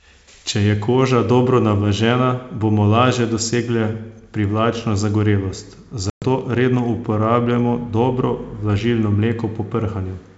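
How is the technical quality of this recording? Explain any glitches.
The recording has one clear glitch, a short packet-loss dropout. The G.722 wideband coding at 64 kbit/s carries the speech cleanly up to around 7 kHz.

Packet loss on an ADPCM call runs from 6.10 to 6.24 s, between "lažje dosegle privlačno zagorelost" and "redno uporabljajmo dobro". A 120 ms stretch, which points to several lost packets, is replaced by a hard-edged silence. A plain dropout would resume cleanly. Here the decoder's adaptive predictor and step size have drifted from the sender's, so the speech comes back slightly distorted before settling.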